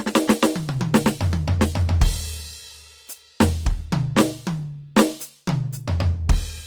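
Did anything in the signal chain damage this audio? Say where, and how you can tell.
Yes. Throughout the music, the codec stage leaves plainly audible damage, likely from Opus compression in its CELT music mode. Tones sound grainy and rough rather than swirly. Bands are filled, not holed, and content reaches 20.2 kHz, which fits roughly 24 kbps.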